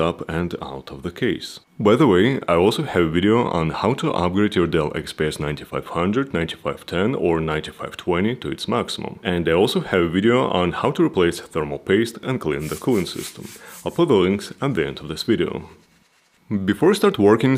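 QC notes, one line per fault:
No faults found in this audio. Nothing here needs a QC entry.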